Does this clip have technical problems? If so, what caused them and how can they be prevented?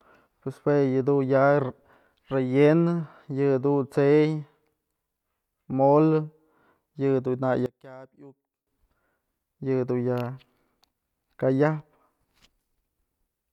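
Yes. From 7.66 to 8.67 s the speech suddenly drops by about 22 dB, which points to one channel inverted, likely: the shared centre cancels when left and right are summed, leaving only their small differences. To prevent it, check polarity on every channel and run a mono-compatibility check before export.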